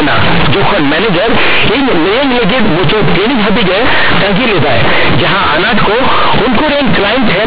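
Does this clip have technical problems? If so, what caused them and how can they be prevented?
Yes. The speech was stored as mu-law, but the player treated each byte as a plain linear 8-bit sample and skipped the expansion step, so the fault of companded audio read as linear runs through the whole clip. Because mu-law bytes carry a logarithmic code, every sign change throws the output across roughly half its range. Quiet passages come out as loud as strong ones, and the waveform is badly bent. The result is harsh, buzzy distortion at high level throughout, with heavy noise filling the pauses. Beneath it, the narrow telephone band of G.711 coding, with nothing above 4 kHz, is as expected. To prevent it, tag the stream's encoding and always run bytes through the mu-law decoder before playback or mixing.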